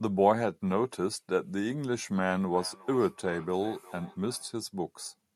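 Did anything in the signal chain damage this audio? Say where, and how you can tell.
Yes. The damage is in call processing, a feedback echo between two devices. From 2.42 s to 4.54 s the speech comes back as a delayed copy at a steady interval of roughly 0.4 s, peaking at about 20 dB below the direct speech. A second device in the same room plays what this microphone sent back into this microphone, and each device's echo canceller only subtracts its own playback, so the reflected signal passes through.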